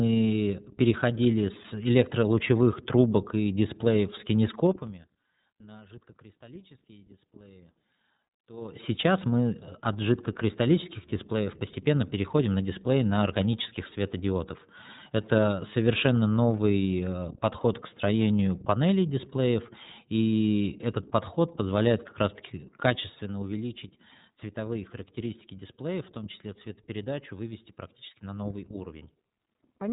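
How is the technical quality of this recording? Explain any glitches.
The technical quality is limited: the whole recording is band-limited and codec-coloured, and one fade carries an audible zipper.

Throughout, iLBC codec coding removes everything above 3.8 kHz and makes the speech slightly rough and synthetic, consistent with 30 ms frames; a spectrogram shows a hard ceiling there.

From 4.64 to 5.08 s, zipper noise accompanies a fade of roughly 25 dB, applied in unsmoothed 3 dB steps about twenty times a second. This is heard as ticking, and the waveform envelope looks like a staircase.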